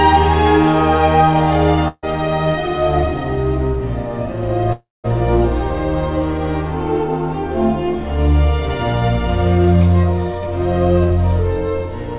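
At 1.88 s a burst of packet loss begins and lasts until about 2.05 s. Roughly 140 ms of audio never arrives, so the receiver stretches the last sound it had across the gap. This is heard as a brief held buzz or hiss that fades, with about 30 ms of true silence before playback resumes further on. On a spectrogram the harmonics or noise band freeze into flat horizontal streaks that dim, then a thin blank column appears. In the waveform, a repeating, decaying pattern gives way to a short flat line. All of this sits below the 4 kHz ceiling, which points to a narrowband call codec such as G.711.

From 4.73 s to about 5.06 s the sound cuts out for a longer stretch, about 320 ms in all. For the first part of that time the last sound continues as a fading buzz or hiss, and the final 190 ms or so is near-silent before the audio returns further along. The likely cause is a long network dropout. The spectrogram shows a smeared, static band that fades into an empty region, and the waveform shows a tapering, repetitive envelope followed by a flat stretch.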